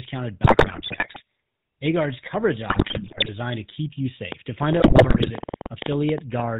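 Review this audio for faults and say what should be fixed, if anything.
The whole recording carries the buzzy, gravelly roughness of the GSM full-rate codec, with nothing above 4 kHz. The sound matches a 13 kbps full-rate coder, which models the vocal tract and drives it with sparse, regularly spaced pulses. On a spectrogram the energy stops sharply at 4 kHz, and the harmonics look smeared and grainy. To prevent it, capture or route the call over a wideband path instead of a full-rate GSM leg.

GSM bit errors break the audio into squawks, pops and gargling from 0.44 to 1.21 s, 2.70 to 3.30 s and 4.80 to 5.31 s. Corrupted filter, pitch and gain values reach the decoder. On the spectrogram these stretches show abrupt, frame-sized blocks of misshapen spectrum. The waveform has sudden level spikes. To prevent them, secure a stronger radio link or use error concealment at the receiver.

A train of clicks ticks over the sound from 4.32 to 6.41 s. 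It has about twenty similar pulses at roughly 8.7 per second, unevenly spaced and peaking around 10 dB above the signal. They are likely interference from nearby equipment. On a spectrogram they appear as thin full-band vertical lines. On the waveform they are sharp spikes. To prevent it, shield or relocate the equipment and check the cabling and interface.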